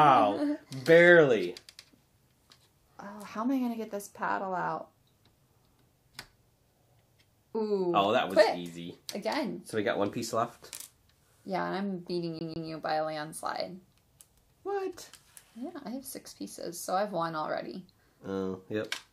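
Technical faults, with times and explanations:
12.39 to 12.69 s, CD stuck on one turn: a 148 ms fragment of the audio repeats twice in a row, with a brief mute at each jump back, producing a quick, evenly spaced stutter of about 0.3 s in total. This is the sound of a skipping disc: a scratch knocks the laser back one track at the same point on each rotation, so the same short stretch is read again before playback moves on.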